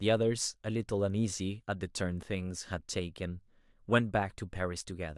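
No technical faults can be heard anywhere in the speech. Nothing in the recording calls for a timestamp or a fix.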